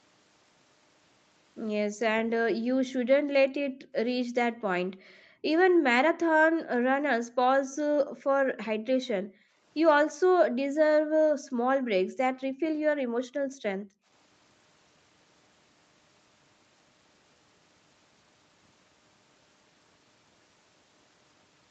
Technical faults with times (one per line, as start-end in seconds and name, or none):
1.89-2.00 background gated by the echo canceller
2.56-9.63 background gated by the echo canceller
5.09-5.13 echo leak
10.07-14.08 background gated by the echo canceller